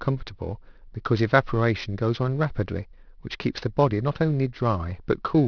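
Aliasing runs the whole way through: the speech was downsampled unfiltered, which fits a drop to 11 kHz, so sibilants fold back around 5.5 kHz as gritty, metallic hash roughly 25 dB down.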